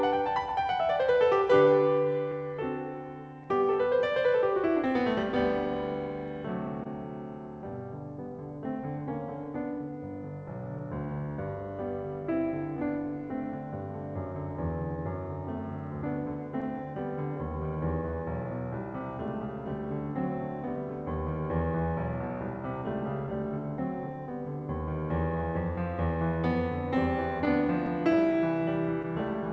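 Throughout the music, clock drift between sender and receiver is present: the sender's clock runs roughly 2 percent slow, so the receiver's jitter buffer keeps draining and has to be topped up. This drift drives the timing edits heard across the clip.

From 0.22 s to 28.16 s, repeated timing corrections stretch playback to 98 percent speed, adding something like 400 ms in total. The receiver repeats short slices of audio at uneven intervals, heard as faint hiccups and a slightly unsteady tempo.

Between 1.15 s and 3.46 s, scattered short gaps appear: about three tiny holes, the longest only several milliseconds, patched by extending the preceding sound. They come across as brief ticks or smears in the music, all within the band-limited G.722 path that carries nothing above 8 kHz.

From 27.45 s to 29.05 s a second cluster of scattered short gaps follows, roughly four holes of up to about 10 ms, again concealed by continuing the last sound. 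These produce a few more small ticks and smears near the end.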